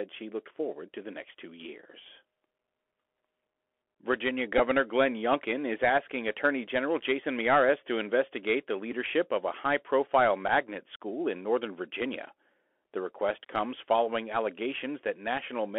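Speech carried over a Bluetooth headset link, with the narrowband Bluetooth CVSD headset codec audible throughout. The audio sits in a telephone band of roughly 300 Hz to 3.4 kHz, so everything above that is gone. The sound points to CVSD at 64 kbps, where each sample is coded as a single up-or-down bit with an adapting step. That step cannot keep up with fast, loud high-frequency content, so sibilants come out scratchy and distorted over a granular hiss. The codec damage is plainly audible. The Bluetooth headset packet repeated fault occurs three times: at 4.58 s, at 8.92 s, and from 10.48 to 10.51 s. In each case lost voice packets were replaced by decoding the previous packet's bits again. The first and third events cover about 11.2 ms, which fits three consecutive repeats. The second covers 7.5 ms, which fits two. Repeating the same 3.75 ms packet produces a brief buzzy tick near 267 Hz rather than a silent gap.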